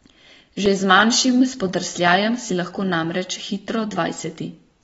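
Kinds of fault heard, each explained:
AAC compression: The speech sounds dull and smeared throughout, and the damage is plainly audible. Nothing is present above 7.6 kHz, so the top of the spectrum is simply gone. That hard ceiling and the blurred texture are likely the work of AAC-LC coding at a low bitrate, roughly 24 kbps. The coder quantises each frame's frequency lines against a hearing model. At this rate it drops the highest band and coarsens the rest, which gives the speech its muffled, unstable quality.
Block of digital silence: At 0.66 s the audio drops to silence for about 2.9 ms, then resumes. There is no fade on either side. The waveform jumps abruptly to silence and back, so the gap is heard as a brief tick rather than a noticeable hole. The length fits a 128-sample block. That points to one audio buffer that was not filled in time before it was sent out.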